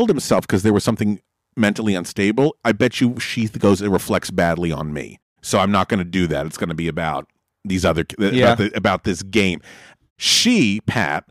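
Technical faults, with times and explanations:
Throughout, hard clipping: the speech was pushed about 7 dB beyond what one stage could pass, so roughly 0.7 percent of samples had their peaks sliced flat. The flat tops add high harmonics, heard as distortion on the loudest syllables. The waveform shows squared-off peaks, and the spectrogram shows brief broadband streaks reaching far up.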